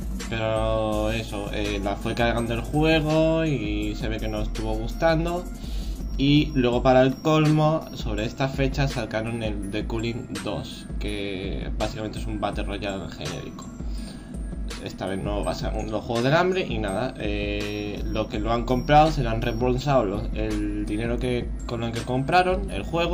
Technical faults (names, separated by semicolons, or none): none